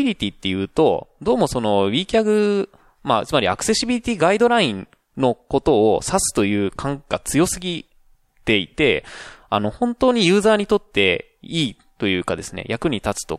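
Listening closely to the speech, nothing stood out as a technical fault at any point.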